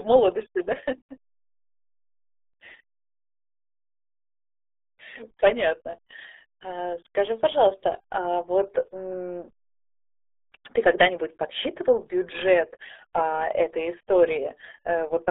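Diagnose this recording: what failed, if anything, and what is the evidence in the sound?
Across the whole recording the speech sounds muffled and gargly, with a thin, boxy tone and a bubbling roughness on every syllable. Nothing comes through above about 3.8 kHz, and the usable band sits roughly between 300 Hz and 3.5 kHz. The fault is at the codec stage: the RealAudio 14.4 codec. The heavy damage fits a speech codec running at about 8 kbit/s, which discards detail and treble to fit a dial-up modem link.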